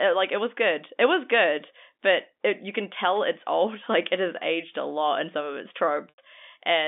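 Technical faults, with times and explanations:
6.09 to 6.18 s, packet loss with pitch repetition: just after "in some of its", the sound holds on a buzzy, repeated tone that fades toward silence before speech resumes through a brief cross-fade. About 90 ms of audio never arrived, which fits three 30 ms packets. The receiver filled the gap by looping the last pitch period and fading it out.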